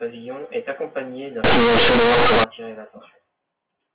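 From 1.44 to 2.44 s, right after "est accompagné d'un", the speech becomes a loud, harsh buzz: companded audio read as linear. Mu-law bytes are played as plain 8-bit samples without expansion, so every sign change swings half the range. Unlike clipping, pauses turn loud too.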